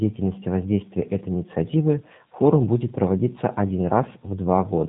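Throughout the clip the speech has passed through a G.729 codec, and the bandwidth and texture fit its 8 kbit/s form. The codec rebuilds each short frame from a modelled vocal tract filter, a pitch predictor and a handful of pulses, then discards the original waveform detail. Nothing above about 3.8 kHz survives, so sibilants and breathiness are dull. The remaining speech is plainly rough, buzzy and slightly synthetic.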